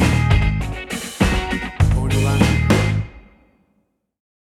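From the start of the clip until 2.18 s there is a doubled audio track: a second, full-band copy of the sound trails the original by about a tenth of a second, sitting roughly 10 dB lower. It carries no decay or room colouring, so it reads as a clean slap-back rather than reverb, and it drops out abruptly at 2.18 s. The likely cause is the signal being captured twice, once through a slower path.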